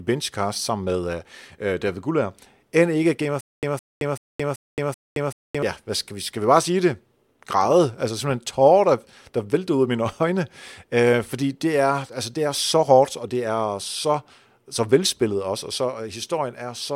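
From 3.41 to 5.62 s the speech falls into a stutter with silent gaps: the same 163 ms fragment plays five times, each followed by about 221 ms of dead digital silence, so it recurs every 383 ms before normal speech resumes at "hvad skal vi skal". The likely cause is a stalled player or stream replaying its last buffer on each retry. Unlike a simple dropout, the gaps alternate with identical repeats, and the audio meant for that stretch is lost.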